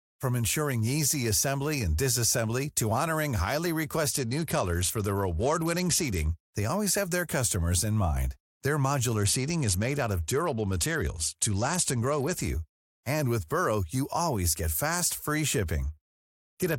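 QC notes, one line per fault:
4.12–6.31 s, 9.16–12.41 s and 15.85 s to the end: Bluetooth SBC bit pool drop. Treble dulls and gritty noise rises as the link starves the top sub-bands and coarsely quantises the rest, which fits the bit pool falling from 31 to 11, near 83 kbps.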